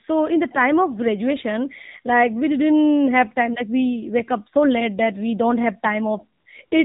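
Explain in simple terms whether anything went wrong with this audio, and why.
The speech went through the AMR narrowband mobile codec, an old phone-network system that cuts everything above 4 kHz, leaving the whole clip muffled, buzzy and synthetic. At 6.40 to 6.46 s, right after "that we don't have", and again at 6.66 to 6.72 s, AMR comfort noise appears: the phone judged the talker silent and filled each gap with smooth artificial hiss.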